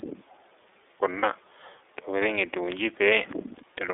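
Throughout, the speech is squeezed into a roughly 300 Hz to 3.6 kHz band by the iLBC codec, sounding clear but rough and synthetic, with nothing above 4 kHz, which fits 13.33 kbps with 30 ms frames. From 1.19 to 1.24 s, lost iLBC frames leave a short held, buzzy vowel-like tone, consistent with a single lost frame. Unlike a dropout, the gap is filled rather than silent, and the voice recovers almost immediately.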